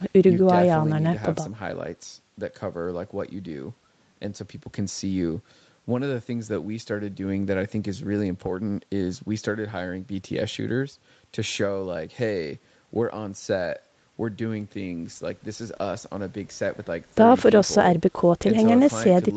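No technical faults can be heard in this speech: the sound carries nothing above 8 kHz, as expected from call microphone processing and a WebRTC call path with an Opus-type codec, and nothing in it is broken, dropped or distorted.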